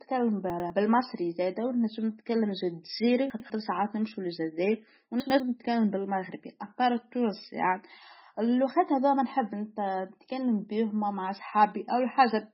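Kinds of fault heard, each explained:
MP3 compression: The speech sounds watery and swirly throughout, with smeared consonant onsets, a metallic edge on s sounds, and nothing above 5.6 kHz. This is likely heavy MP3 encoding at a very low bitrate, around 16 kbps. Short of bits, the encoder cuts the treble at a fixed point and drops weaker frequency lines, which flicker on and off from frame to frame.
chunks out of order: Three brief jumbled moments, at 0.5 to 0.7 s, 3.3 to 3.5 s and 5.2 to 5.4 s. In each, a 100 ms piece of audio plays one slot late, after the piece that should follow it. No sound is lost, but the order inside each 0.2 s span is swapped, leaving abrupt seams.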